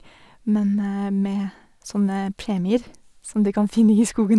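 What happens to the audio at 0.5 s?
Nothing goes wrong at 0.5 s; the speech there is intact.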